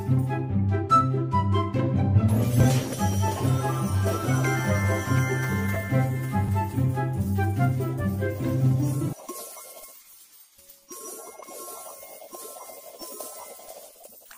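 Chunks out of order occur at 2.60 to 2.65 s, 5.73 to 5.76 s and 6.44 to 6.49 s. In each, a short block of about 10.7 ms is written late and plays after the blocks that should follow it: three blocks late at the first and third points, two at the second. Nothing goes missing, but each reshuffled stretch brings three hard joins, heard as a brief jumbled flutter.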